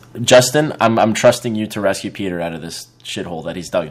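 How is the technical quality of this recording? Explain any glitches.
The recording has a couple of clear problems, both in the first second and a half.

Microphone overload runs from 0.32 to 1.3 s. The loudest peaks get their tops sheared flat, giving a harsh, crackly edge on a few percent of samples. The likely cause is input gain set about 10 dB too hot for the converter.

Microphone volume stepped down happens twice, at 0.34 s by about 2 dB and at 1.35 s by about 4 dB. The speech and background both drop abruptly, most likely because the call software heard the distortion and cut the mic's input level.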